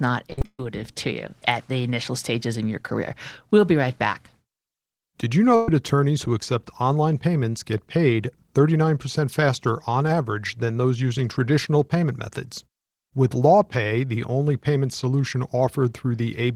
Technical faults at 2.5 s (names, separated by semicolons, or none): none